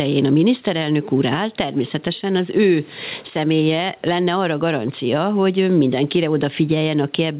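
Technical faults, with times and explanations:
Throughout: gain pumping. The level swings by around 10 dB, pulling down under louder speech, likely from excessive input gain driving a fast limiter.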